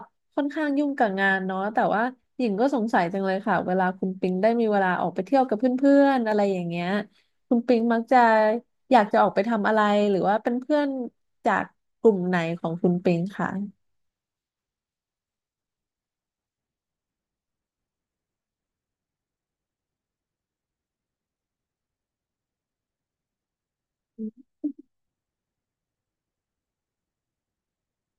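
Dropped samples, heard as four isolated sharp clicks at 3.41, 6.32, 7.80 and 10.47 seconds in this speech clip. Each is a single instant with no sound missing, only a tick that shows as a thin vertical line through the spectrum. The likely cause is a brief loss of a tiny stretch of the stream, a fraction of a millisecond, so the waveform jumps abruptly to a later value and produces the click.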